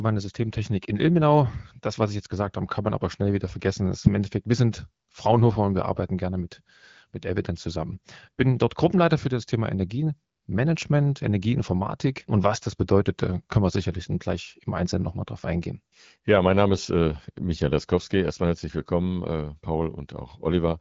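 Nothing stood out on listening to this speech clip, which comes through the AMR wideband (HD Voice) codec at 12.65 kbit/s.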